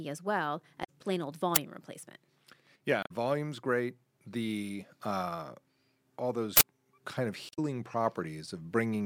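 Speech carrying two kinds of glitch. Damaged data in a compressed stream shows up three times, at 0.83 to 0.89 s, 3.01 to 3.11 s and 7.49 to 7.59 s, each a brief chirp or squawk some 60 to 100 ms long. Corrupted bytes in the encoded stream make the decoder misread those frames and lose sync until it finds a clean frame header. An uninitialised buffer accounts for the other two events: a single harsh burst at 1.56 s, about 10 ms long, and a longer one at 6.57 to 6.61 s lasting about 40 ms. Here a playback block went out before audio had been written into it, so leftover memory was played as samples. These bursts are loud digital noise, and their lengths match whole blocks of 10 and 40 ms.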